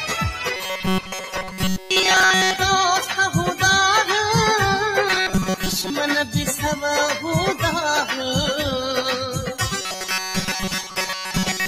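A noise suppressor applied to music or sounds runs from the start to the end. A processor meant for speech treats held tones, ambience and decay tails as background noise and pulls them down, letting only the onsets through at full level. The level swings by roughly 5 dB as sustained material dips and recovers, so the audio pumps and thins, with tails cut short instead of fading naturally.

Robotic sound from repeated short buffers appears from 0.56 to 2.59 s, again from 5.09 to 5.90 s, and from 9.81 s to the end. The sound turns into a hard, metallic buzz at 188 Hz that still loosely tracks the underlying material. This is likely caused by new audio arriving too rarely, so playback loops a fragment about 5.3 ms long, most of the time instead of real audio, and that repetition imposes the fixed pitch.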